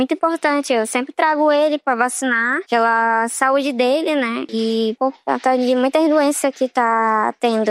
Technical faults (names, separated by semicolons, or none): Bluetooth SBC bit pool drop